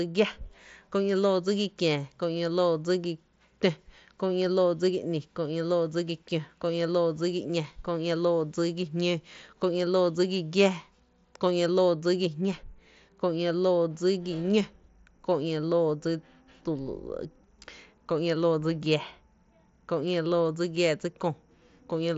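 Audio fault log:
No faults turn up anywhere in this speech recording. It has passed through a Bluetooth mSBC headset codec working as intended, with the band stopping at 8 kHz and a light grain on the louder syllables, which fits mSBC's wideband mode at about 61 kbps.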